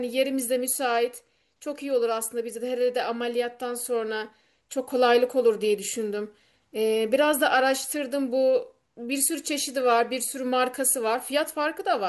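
No technical faults are audible.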